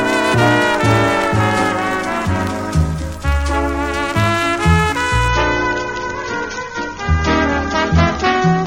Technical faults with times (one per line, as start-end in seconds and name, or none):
5.28-8.67 adaptive stream at a lower bitrate